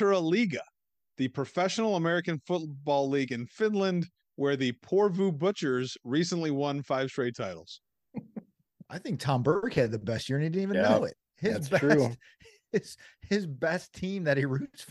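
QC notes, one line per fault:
No faults heard in this clip.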